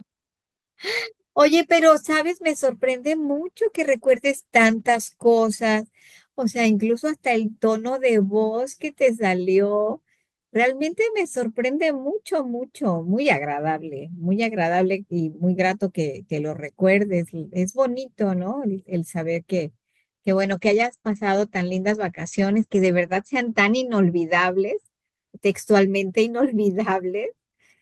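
From 3.23 to 6.17 s the speech turns rough and watery for about 2.4 s, which points to a call bitrate drop from around 32 to 18 kbps. From 20.42 to 24.91 s it grows rough and muffled for about 3 s, with highs cut off above 8 kHz, suggesting a deeper drop to around 14 kbps.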